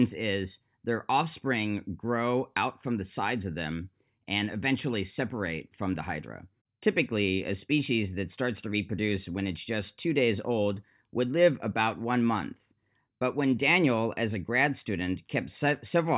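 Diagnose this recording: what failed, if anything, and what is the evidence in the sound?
Nothing failed; no faults detected.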